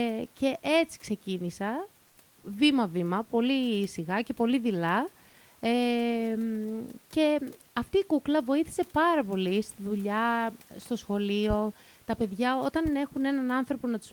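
From 2.07 to 2.17 s, a 100 ms stretch of the room noise turns flat and featureless and drops about 3 dB. This is comfort noise in place of the background, likely from discontinuous transmission, where the receiver fills the gap with synthetic noise.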